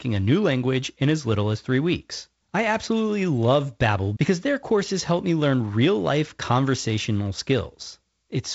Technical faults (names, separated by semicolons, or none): none